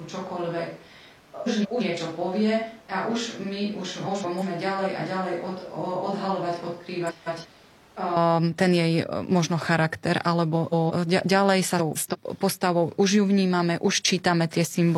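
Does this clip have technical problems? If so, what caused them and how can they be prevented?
Yes. From the start until 8.16 s the speech sounds roomy, hollow and thin in the bass, roughly 5 dB quieter, with room noise only about 25 dB below the speech. It snaps back to close, full sound just before "ten jej e možno". This is likely a switch to a distant microphone, where the close microphone's feed dropped out and a far-off pickup such as a camera microphone filled in. To prevent it, monitor the close microphone during recording and secure its connection and power.

Five short garbled flutters occur at 1.46 to 1.82 s, 4.06 to 4.43 s, 7.09 to 7.46 s, 10.55 to 10.92 s (after "jej e možno charakter", before "e ďalej"), and 11.78 to 12.16 s (after "e ďalej", before "postavou už ju vnímame"). These are frames out of order. In each stretch, two neighbouring runs of about 170 ms, which fits four frames each, play in swapped order, so the sound jumps forward and back without losing any time. 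To prevent it, use a transport or muxer that enforces sequence numbers and reorders frames before decoding.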